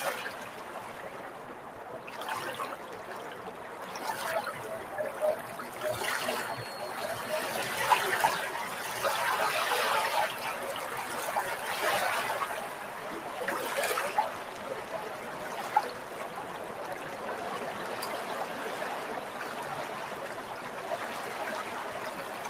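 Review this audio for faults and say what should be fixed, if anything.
A speech-oriented noise suppressor stayed active on a recording of everyday sounds, treating steady tones, ambience and decaying tails as noise throughout the clip. Onsets pass largely intact, but sustained parts get pulled down by roughly 5 dB, so the sound pumps and thins between attacks. To prevent it, disable speech noise suppression, or switch it to a music or raw mode, whenever the source is not speech.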